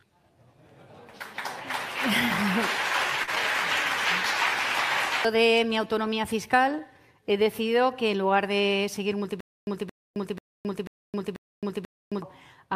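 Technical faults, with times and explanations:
3.23–3.30 s, short concealed packet loss: about 40 ms of the stream failed to arrive at the decoder in time, and the receiver covered the gap with roughly 39 ms of synthesized fill, extending the preceding sound's pitch or noise character before crossfading back into the real signal. The result is a brief smear or wobble at that point.
9.40–12.22 s, stutter with silent gaps: a 223 ms fragment of sound repeats five times, each followed by about 266 ms of digital silence, giving an even cycle of roughly 489 ms. This likely comes from the playback or streaming buffer underrunning, with each retry replaying the last buffered chunk and then running dry. The audio that should have filled this stretch never plays, so the material is replaced by the looped burst and silence.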